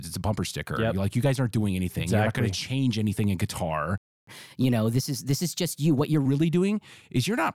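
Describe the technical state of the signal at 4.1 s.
A playback stall runs from 3.98 to 4.27 s, so at 4.1 s the output is silent. The speech cuts off mid-flow for about 0.30 s, likely because the player ran short of data or its thread was blocked, then resumes.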